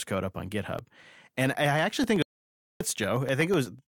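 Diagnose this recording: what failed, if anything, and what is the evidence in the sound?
Periodic USB or driver dropouts at the driver stage. After "code up on", from 0.66 to 3.91 s, ticks repeat every 0.125 s, each a brief silent gap.

Playback stall at the playback stage. Speech goes silent from 2.22 to 2.81 s, 583 ms, then resumes. The player was likely starved of data.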